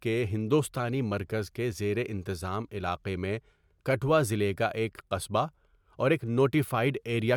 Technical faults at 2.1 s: none

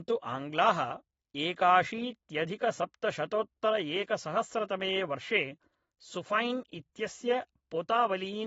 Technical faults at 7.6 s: AAC compression

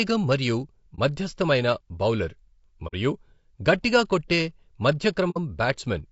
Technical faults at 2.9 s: low-delay AAC compression; AAC frame loss with muting

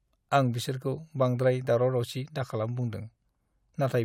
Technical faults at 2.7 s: none

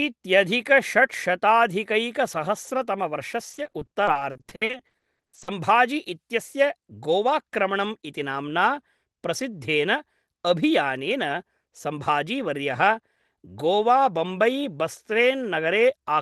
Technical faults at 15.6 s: none

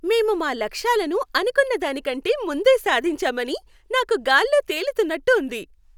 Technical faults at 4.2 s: none

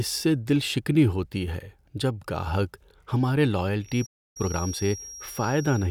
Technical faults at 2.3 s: none

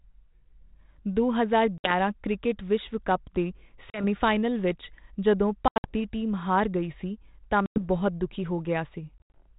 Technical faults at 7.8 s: packet loss on an ADPCM call

